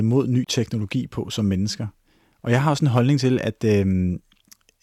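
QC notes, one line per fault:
0.44–0.47 s, Bluetooth dropout: the speech cuts to silence for about 23 ms, then resumes further along, as if it had kept playing. This likely comes from one wireless audio packet arriving too late and being dropped.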